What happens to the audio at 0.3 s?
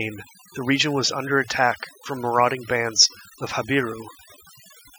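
At 0.3 s the clip is under overdone noise removal, which runs through the whole recording. The reduction is set too hard. Frequency bands close to the noise estimate are cut away, along with quiet parts of the speech. The background drops and breaks up into twinkling specks.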